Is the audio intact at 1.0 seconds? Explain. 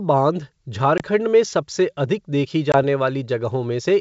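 No. Packet loss on an ADPCM call dropped about one 20 ms packet, 0.98 to 1.03 s; the decoder's predictor then drifts, so sound cuts out hard and returns slightly distorted on "में सबसे अधिक देखी".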